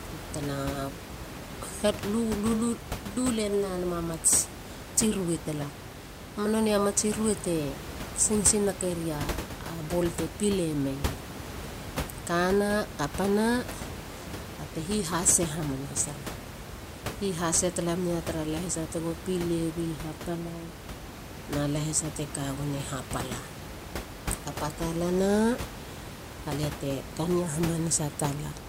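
No technical faults heard.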